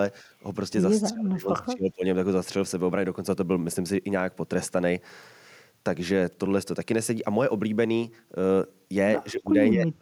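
From 1.03 to 2.04 s the speech sinks by as much as about 30 dB for roughly a second, then again at 9.32 to 9.53 s by about 20 dB and from 9.73 s to the end by about 30 dB. The likely cause is speech suppressed in double talk, with an echo canceller ducking the near talker while the far side spoke. Unlike packet-loss dropouts, the dips follow overlapping talk.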